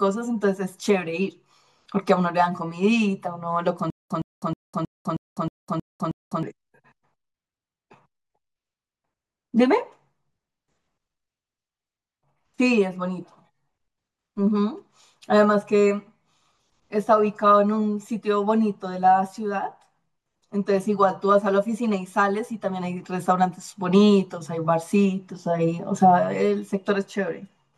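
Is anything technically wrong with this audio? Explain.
Yes. From 3.90 to 6.43 s there is stutter with silent gaps. A 114 ms fragment of speech repeats eight times, each followed by 202 ms of dead silence. This likely comes from a stalled stream replaying its last buffer.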